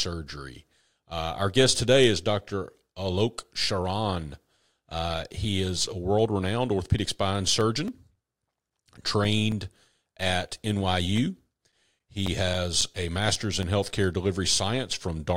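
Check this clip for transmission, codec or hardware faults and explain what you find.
Two bursts of CD scratch ticks, from 7.61 to 10.06 s just after "world renowned orthopedic spine", and from 11.17 to 13.63 s. A blemish defeats error correction once per revolution, so the player patches or mutes samples, giving ten short ticks per burst, about four a second, the longest about 7 ms in the first burst and 10 ms in the second. Unlike random crackle or irregular dropouts, they keep a steady rotational rhythm.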